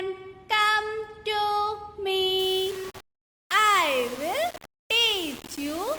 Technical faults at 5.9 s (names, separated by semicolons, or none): low bit depth without dither